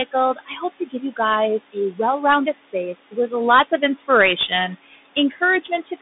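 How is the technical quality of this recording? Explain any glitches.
The recording quality is poor: the sound is narrow and muffled, the background pumps, and parts of the speech drop away.

Throughout, the room noise, sitting about 14 dB below the speech, sinks between phrases. These are noise suppressor artifacts: frame-by-frame band gating pulls the noise down by about 16 dB.

Throughout, the sound is boxed into roughly 200 Hz to 3.7 kHz with scratchy sibilants and granular hiss. This comes from the Bluetooth CVSD headset codec, which fits a 64 kbps link and passes nothing above 3.8 kHz.

At 0.05–1.19 s, 1.59–3.32 s, 3.68–4.52 s and 4.86–6.01 s, soft consonants and word endings sound swallowed. This is speech cut by the noise suppressor, which mistakes them for noise. The deepest drops are about 19, 16, 11 and 17 dB, totalling roughly half a second or less per span.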